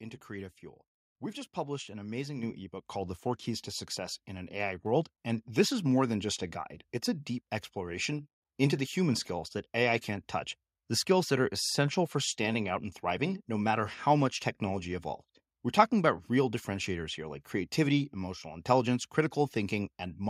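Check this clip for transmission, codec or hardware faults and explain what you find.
One fault stands out: a microphone volume stepped up at 2.43 s, right after "just published an amazing" and before "ebook called". The input level was raised in a single jump of about 7 dB, so the speech and the background noise both get louder at once. The waveform envelope widens abruptly, and the spectrogram brightens evenly across all frequencies from that point on.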